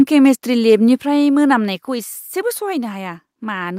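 At 1.02 s the whole speech signal, background included, drops by about 5 dB in one step, and at 2.04 s it drops again by about 4 dB. This is a microphone volume stepped down, likely the call software lowering the device's input gain after judging the level too hot.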